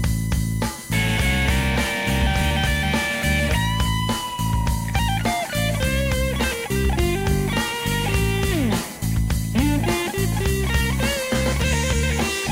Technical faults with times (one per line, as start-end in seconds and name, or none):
0.00-12.52 USB whine